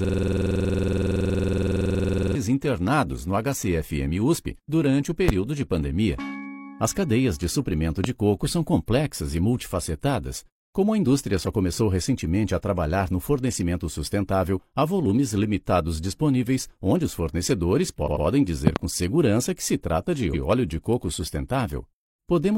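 Right from the start the audio is caught in a system hang loop, already running when the clip opens and lasting until 2.35 s. The machine or driver has stalled while the sound hardware keeps replaying its ring buffer, so one 46.44 ms slice of audio repeats exactly, about 50 times. The slice repeats at 21.5 Hz. That loop length fits a 2048-sample buffer.

Next come two single loud pops, at 5.29 to 5.31 s and at 8.04 to 8.07 s. Each one peaks about 20 dB above the surrounding audio, and the sound carries on underneath without a break. The cause is likely a sudden voltage step or spike, from something like a switch, static or a driver hiccup, which the circuits after it then shape into a sharp pop.

From 18.02 to 18.21 s there are repeated frames. A 92.9 ms block of compressed audio gets played twice more than it should, so the same bit comes back as a stutter and the timeline grows by 185.8 ms.

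Just after that, from 18.67 to 18.79 s, there's another loud pop, this time a quick double, again about 20 dB over the audio.

The last fault is one more case of repeated frames at 20.30 to 20.39 s. Here the 92.9 ms block plays once extra, which adds 92.9 ms and gives a short stutter.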